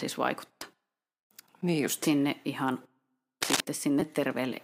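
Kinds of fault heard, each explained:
Damaged data in a compressed stream: Corrupted bytes in the coded speech make the decoder misread frames, lose sync and hunt for the next valid header, so a short blip breaks through, once at 0.62 s and again from 4.00 to 4.02 s. On a waveform each appears as an abrupt discontinuity or brief garbled segment. A spectrogram shows a thin vertical smear of broadband or oddly patterned energy, with the speech harmonics breaking off sharply on either side.
Cable scratch noise: From 3.42 to 3.61 s a rough, crackly rustle sits over the speech at about the same level as the speech itself. It is likely caused by a worn connector or cable being moved, its contact resistance jumping erratically. The waveform shows a dense cluster of irregular spikes riding on the signal. On a spectrogram it is a patch of ragged, speckled broadband energy lasting under a fifth of a second.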